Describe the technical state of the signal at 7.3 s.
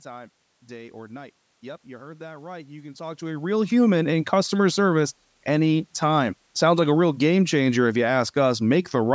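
At 7.3 s the speech signal is intact, with no dropout, clipping, distortion or glitch, only the room's background noise and the call microphone processing's normal band limit with nothing above 8 kHz.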